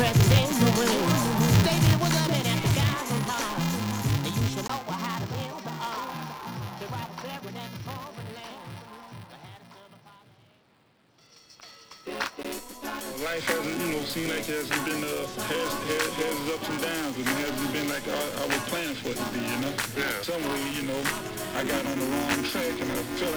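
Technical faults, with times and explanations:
throughout: buffer tearing. The writer and reader of the audio buffer have slipped, so a sliver of audio from a few milliseconds earlier splices in each cycle, giving a rattling 375 Hz buzz that fits a 128-sample buffer.
4.67 to 12.45 s: input switched to a poorer device, likely. After a 20 ms gap, the band narrows and new background noise sits about 35 dB down, at unchanged level.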